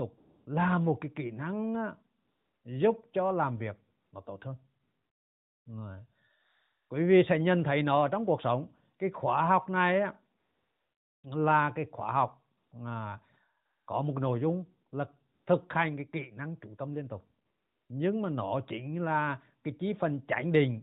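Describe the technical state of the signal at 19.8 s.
At 19.8 s the audio is intact, with no fault present beyond the narrow, band-limited character of the AMR narrowband mobile codec it passes through.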